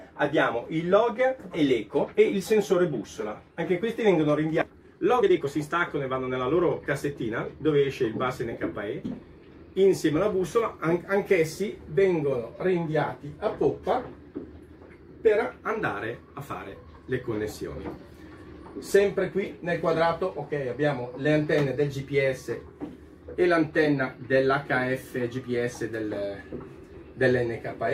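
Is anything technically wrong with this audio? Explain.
Yes, there are two related faults.

At 4.61 s there is a skip ahead: roughly a second of audio was dropped while later audio was already queued, so playback jumps straight forward with no gap. On a waveform the envelope changes abruptly at the splice, and a spectrogram shows harmonic tracks cut off and restarting out of line.

From 4.67 to 7.31 s a jitter buffer speed-up follows. The receiver trimmed short pitch-period pieces, around half a second in all, to shrink its backlog, so the audio runs at about 122% speed with unchanged pitch and sounds hurried. A spectrogram shows compressed, closely packed events at the same frequencies.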